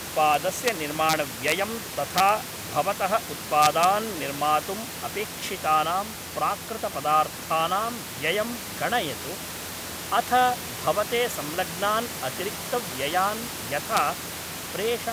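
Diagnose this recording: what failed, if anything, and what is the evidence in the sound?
Violent cracks tear through loud speech peaks at 0.34–0.69, 1.09–1.13, 1.48–1.52, 2.18–2.29, 3.62–3.84 (before "निर्मातुम् अपेक्षितानां प्राकृतपदार्थानां व्ययं") and 13.97 s (after "अथ भवते संलग्नान् अतिरिक्तव्ययान्"). This is integer overflow in sample-format conversion or a gain stage: peaks only about 1–3 dB over full scale wrap to the opposite sign instead of being limited.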